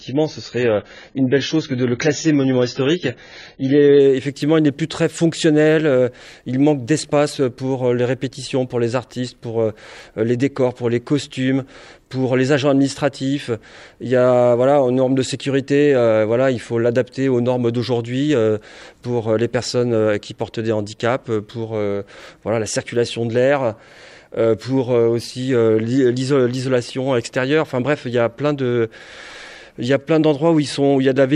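For the first 4.0 s the audio has nothing above 7 kHz and stronger codec artefacts, then quality jumps with no gap. This is an adaptive stream starting at a low bitrate: the start fits roughly 16 kbit/s AAC, stepping up to around 96 kbit/s once throughput was measured.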